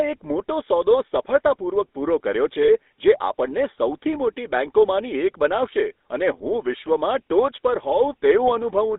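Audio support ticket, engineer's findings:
Buzzy, gravelly roughness on all speech, band limited to roughly 250 Hz to 3.7 kHz. GSM full-rate codec, which fits a 13 kbps channel. The vocal tract is modelled and driven by regular pulses, with the excitation thinned to every third sample.

Brief rough, metallic ring holding the sound, 2.64 to 2.69 s. Lost GSM frames, about 40 ms, which fits two 20 ms frames. The decoder concealed the gap by repeating the last good frame's settings.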